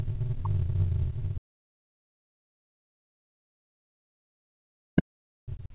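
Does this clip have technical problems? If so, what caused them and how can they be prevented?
Yes. In the first 0.3 s, from 0.0 to 0.3 s, a faint second voice sits underneath the talker, around 25 dB below it. This is other side's voice leaking through, and the likely cause is residual echo. The far end plays on the device's loudspeaker, reaches the microphone, and the echo canceller did not remove all of it, so part of it passes through. Prevention: use a headset, or let the canceller converge with a short period of far-end-only audio before the talker speaks.

From 0.03 to 0.08 s, inside that same opening stretch, the room sound drops by about 20 dB for roughly 50 ms and then returns. This is background gated by the echo canceller. While loudspeaker playback was detected, its nonlinear suppression stage pulled the microphone signal down hard, removing the ambient sound along with the echo, and released once it judged the echo gone. 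Prevention: tune the suppressor for gentler attenuation with comfort-noise fill, so ambience does not visibly gate.

From 0.36 s to the end at about 5.75 s, the talker's own sound dips, at worst by something like 40 dB. This is speech suppressed in double talk, likely caused by both sides talking at once. The canceller could not separate the near-end talker from the loudspeaker echo, so it attenuated everything it treated as echo, including the wanted signal. The whole clip is also band-limited to 4 kHz, which fits a narrowband G.711 call path. Prevention: use a headset or better loudspeaker-microphone isolation, and use an echo canceller with robust double-talk detection.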